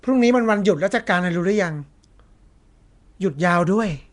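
It's a speech clip with a rough, hissy halo and a smeared, underwater feel the whole way through, and nothing at all above about 10.6 kHz. That plainly audible damage points to Nellymoser compression, likely from Flash's old coarse-block microphone codec filling starved bands with noise.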